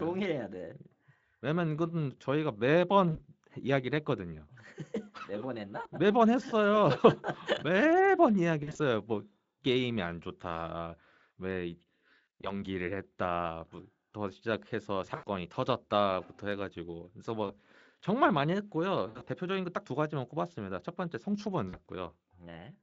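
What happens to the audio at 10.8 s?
Nothing goes wrong at 10.8 s; the speech continues intact through that moment, with only the light coloration of the Speex codec that carries it.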